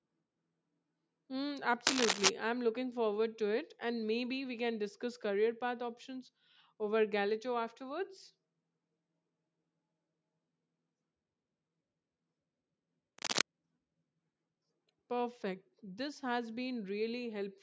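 From 1.86 to 2.30 s, just before "I'm looking forward to", and again from 13.18 to 13.41 s, dense, uneven scratching bursts sit over the speech. The first is somewhat louder than the voice, the second about level with it. This is cable scratch noise, likely from a worn cable or connector shifting and changing its contact resistance.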